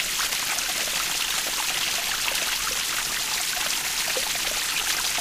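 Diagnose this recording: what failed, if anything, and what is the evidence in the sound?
Nothing failed in this recording, and there is no evidence of a fault anywhere in the sound.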